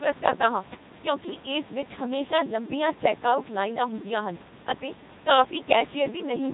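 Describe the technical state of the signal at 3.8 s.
At 3.8 s the speech is carried through a Codec 2 vocoder, which affects the whole clip rather than just this moment. Instead of keeping the waveform, the decoder rebuilds the speech from sine waves driven by pitch, voicing, energy and a coarse spectral envelope. The damage is heavy: the speech sounds robotic and buzzy, nothing is present above 3.8 kHz, and the room noise about 22 dB below the speech is smeared along with it. The degree of degradation fits a 2.4 kbit/s mode.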